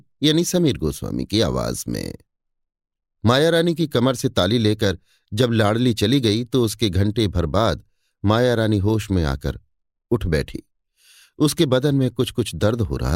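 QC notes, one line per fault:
Nothing to flag here, this speech clip gets through without a single fault turning up.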